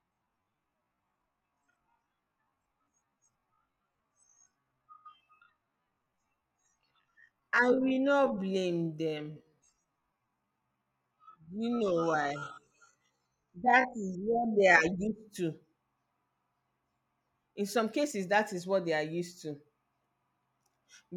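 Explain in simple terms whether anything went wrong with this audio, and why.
A time-stretched section runs from 0.0 to 14.8 s: the speech plays at about 0.56 times normal speed while its pitch stays the same, so it drags. This was likely software lengthening the audio by repeating tiny slices to fill time.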